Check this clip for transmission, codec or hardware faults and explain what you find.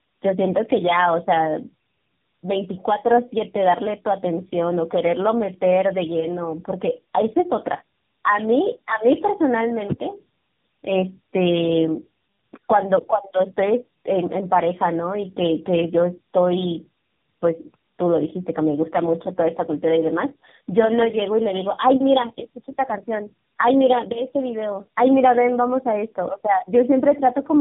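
The speech has been through tandem speech coding, and it is present for the whole clip. The call appears to have crossed several links, each decoding the audio and coding it again with its own speech codec. Here it points to about three such coders in a row, with the band cut off above 3.7 kHz. Every stage models an already degraded signal, so errors stack. The result is rough, muffled and warbly speech. A single low-bitrate codec leaves one consistent coloration, but here the artefacts are compounded, with a smeared, reprocessed quality.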